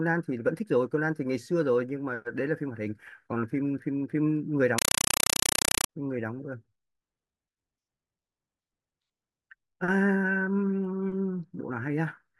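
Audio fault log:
4.78 to 5.89 s, compressed stream played as audio: The speech gives way to very loud, chattering static. A compressed stream reached the output undecoded and was played as if it were ordinary samples. Each coded frame comes out as a 5.33 ms burst of noise, then silent padding. The bursts repeat 31.25 times a second, which gives the harsh rattle. That frame rate and spacing fit an AC-3 stream at 256 kbps.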